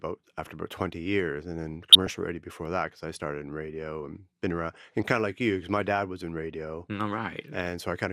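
Speech, with DAB burbling at 1.91 to 2.09 s and 7.55 to 7.65 s. Both bursts put short blips of noise into single sub-bands over the speech. Weak reception lets a fraction of a percent of bit errors through, corrupting several MP2 frames.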